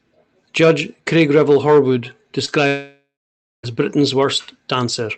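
At 2.45 s, running to about 2.50 s, there is a brief smear in the speech, a short wobble where roughly 20 ms of sound is gone and the gap is bridged by a continuation of whatever came just before. This is short concealed packet loss: a small piece of the call arrived too late for the decoder, which extended the last sound for about 25 ms and then blended back into the real signal. What sets it apart from a true dropout is its brevity. Nothing goes quiet. The audio simply loses a sliver and carries on.

From 2.68 s to 3.65 s comes a much longer break. The last sound keeps going as a synthetic buzz that fades away, then there is silence for roughly half a second, and the speech returns further on with nearly a second of material missing. This is most likely a long network dropout, with the receiver filling the gap until it had nothing left to extend. The long dead stretch and the skipped content are what distinguish it from the brief, self-healing smear at 2.45 s. 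Throughout, the sound is limited to about 8 kHz, consistent with Opus running at a modest call bitrate around 32 kbps.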